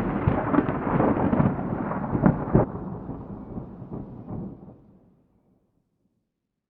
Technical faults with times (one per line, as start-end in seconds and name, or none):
2.63-2.65 stream segment skipped